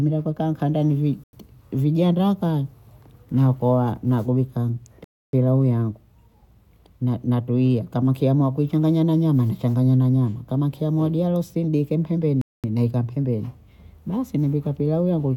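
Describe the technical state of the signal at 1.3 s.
At 1.3 s you're right inside a short dropout: the speech cuts to silence from about 1.24 to 1.33 s, roughly 95 ms, then resumes. That's likely a Bluetooth stall, where interference delayed packets, the headphones' buffer ran dry, and playback paused until the resent data arrived.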